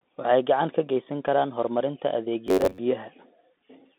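Speech passed through a Bluetooth CVSD headset codec, the narrowband link that fits a 64 kbps one-bit delta stream. Each sample only nudges the signal up or down with an adapting step, so the band is held to roughly 200 Hz to 3.6 kHz and nothing above 4 kHz survives. The codec damage is plainly audible: sibilants sound scratchy, loud bright moments distort where the step can't keep up, and a grainy hiss sits under the voice. From 2.47 to 2.79 s, just after "ka geysan karaan horumarinta", the likely cause is audio arriving too slowly, with the playback repeating short buffers to fill the gap. This robotic sound from repeated short buffers replaces most of that stretch with looped fragments, pressing a fixed buzz near 94 Hz onto the voice. That rate fits buffers of about 10.7 ms, and it gives the speech a rigid, metallic drone that only loosely tracks the syllables.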